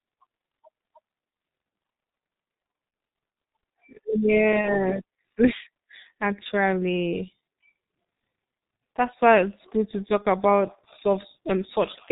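Speech, heavily squashed by the G.723.1 codec for the whole clip. Nothing gets through above 4 kHz, so it sounds muffled and hoarse, and consonants smear because the codec's voice model only updates every 30 ms frame. The grainy quality fits a bitrate around 6.3 kbit/s. On top of that, there are three spots of VoIP packet loss concealed by the speech codec: 2.90–2.93 s, 4.61–4.78 s, and 10.22–10.26 s, right after "why it's good to". Each one sounds like a single 30 ms gap. The decoder fills it by carrying its last pitch and filter forward at falling gain, so you hear a short, fading smear instead of a dropout. At 4.61 s it hangs on for about 170 ms, because each frame builds on the one before, so the damage outlasts the loss itself.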